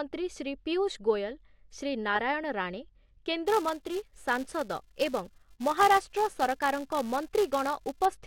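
From 3.47 s to 8.06 s the speech carries a filter restarted on every block: the filter drops its stored state at each block boundary and starts again from silence, leaving a tiny transient every time. These merge into a steady 345 Hz buzz, which fits a 128-sample block. Unlike mains hum, it rises and falls with the speech level and vanishes in pauses. Unlike dropout clicks, it is evenly spaced.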